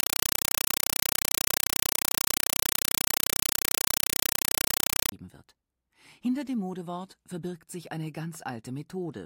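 From 0.0 to 5.12 s, a compressed stream played as audio: an AC-3 (Dolby Digital) bitstream, likely around 256 kbps, is read as plain samples. It is heard as very loud chattering static, 5.33 ms noise bursts repeating 31.25 times a second, and shows as full-band vertical stripes separated by flat silence.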